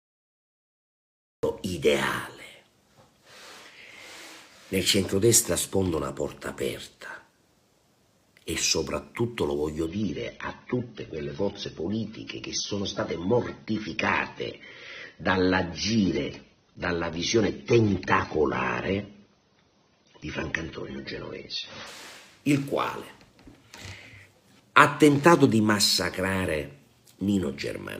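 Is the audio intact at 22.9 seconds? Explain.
Yes, at 22.9 seconds the audio is intact, with no dropout, click, distortion or other fault audible at that moment.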